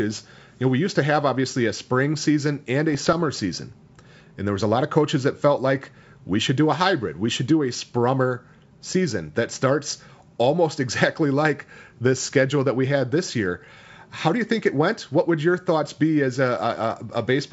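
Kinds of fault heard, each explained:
Bit errors on an ADPCM link: from 2.92 to 3.22 s, after "a spring season and", pops and rough bursts with brief level jumps break through. Scattered flipped bits upset the decoder's step size and predictor, so each error rings on for milliseconds.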